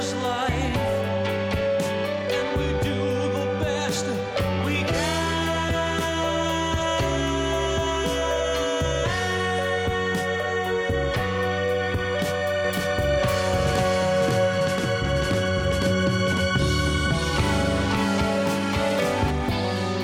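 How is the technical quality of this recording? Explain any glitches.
The recording has one clear glitch. A doubled audio track runs from 12.6 to 19.3 s: a second, equally loud copy trails about half a second behind, likely from a slower capture path, and starts and stops abruptly.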